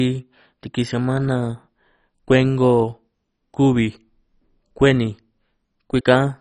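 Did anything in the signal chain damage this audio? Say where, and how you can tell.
Yes, at the codec stage, and the damage runs through the whole speech clip. The audio is dull, with nothing above about 10.4 kHz, and has a gurgling, granular grain throughout. That points to MP2 compression, likely at a very low rate, around 32 kbps. Layer II divides the spectrum into 32 sub-bands and shares out bits among them. Starved of bits, it switches off the upper bands and quantises the remaining ones coarsely. Bands dropping in and out cause the gurgle.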